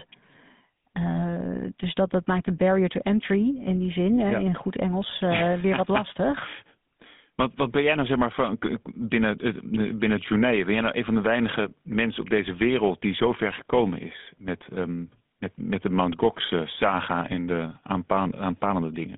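Speech that has been carried through the GSM full-rate codec for its entire length, the original 13 kbps mobile voice coder, with the audio confined to a telephone band of roughly 150 Hz to 3.6 kHz. The codec rebuilds the voice from a vocal-tract model fed by a sparse, regularly spaced pulse excitation, and here that damage is plainly audible: a buzzy, gravelly roughness over the speech, with no low bass and nothing of the upper treble.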